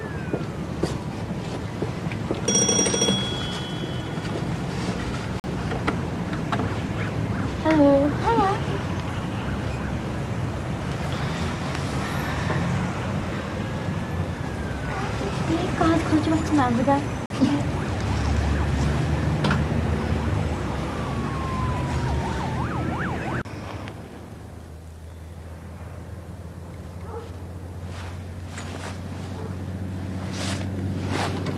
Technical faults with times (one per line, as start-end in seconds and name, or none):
5.40-5.49 digital broadcast dropout
8.05 dropped samples
17.26-17.34 digital broadcast dropout